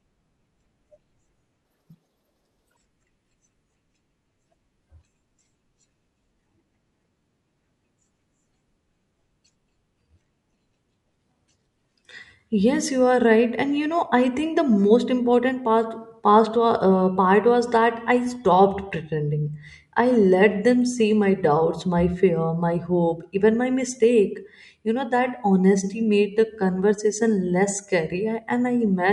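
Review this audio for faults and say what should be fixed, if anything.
Wrong sample rate from 1.65 to 2.77 s: the speech jumps up a full octave (12 semitones) and runs at double speed, which fits 24 kHz material played at 48 kHz without conversion, so pitch and tempo rise together by a factor of 2.0. To prevent it, resample to the output rate or pass the correct rate to the playback device.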